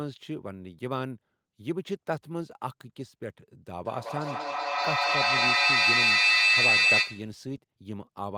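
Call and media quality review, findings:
Feedback howl, 3.76 to 7.44 s: tone near 3 kHz builds to about 10 dB over the speech, pulsing roughly every 200 ms. Probable component: two endpoints on the call sharing a room. Mic-to-speaker loop gains level each pass, so repeats grow and narrow onto 3 kHz. The pulse rate points to about a 200 ms round trip. Worth checking who had two devices joined at that point.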